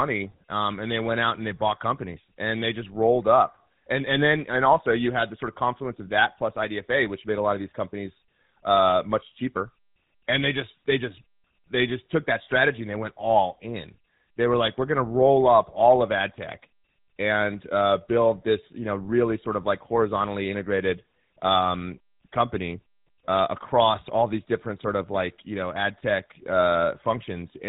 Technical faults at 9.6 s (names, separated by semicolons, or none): GSM full-rate codec